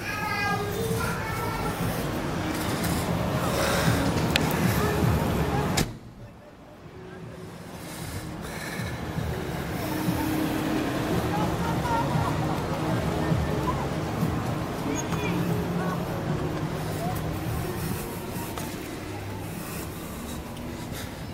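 No technical faults can be heard anywhere in the recording. Nothing in the sound points to a fault in how it was captured, processed or played back.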